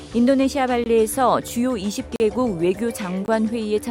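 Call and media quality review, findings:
Block of digital silence, 3 occurrences. Output buffer likely not filled in time, so zeros are played. At 0.84–0.86 s, 20 ms hole. At 2.16–2.20 s, 40 ms. At 3.26–3.28 s, 20 ms again. Hard cut to zero and back with no fade. The shorter gaps are heard as short holes, the longer as a brief audible hole.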